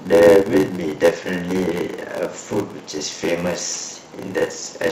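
From the start and throughout the speech there is a steady buzz at about 86 Hz, the sign of a block size mismatch (padded). One stage hands over shorter blocks than the next reads, which fits a 512-sample read block, and each block is topped up with silence. That puts a tiny gap in every block, so the buzz sits at the block rate, and the audio runs slow at 0.861 times normal speed. The pitch stays about where it should be, which separates this from a sample-rate mismatch, where a slowdown would also drop the pitch.

From 3.98 to 4.10 s, DAB burbling breaks in. Uncorrected bit errors in the MP2 data, at a rate of only a small fraction of a percent, which fits weak reception, corrupt 8 frames. Wrong samples put short blips of noise into single sub-bands over the speech. Unlike packet-loss dropouts or concealment, the sound does not go silent or repeat. The spectrum churns in narrow bands, and the effect is confined to this short stretch.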